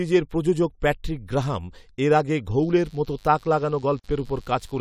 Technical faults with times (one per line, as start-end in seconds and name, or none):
2.54-4.80 mains buzz
3.99-4.04 gap at a join of encoded pieces